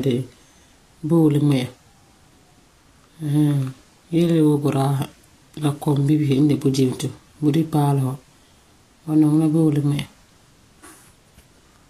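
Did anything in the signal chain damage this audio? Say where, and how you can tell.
Yes. Vorbis compression runs throughout the speech, from start to end, and is likely the damage, introduced at the codec stage. Nothing is present above about 14.2 kHz, and the upper band sounds hissy and grainy, with roughened voiced tones and smeared consonant attacks. Fine treble detail has been quantised so coarsely that it comes back as noise of similar energy. That plainly audible damage fits a low bitrate of around 36 kbps.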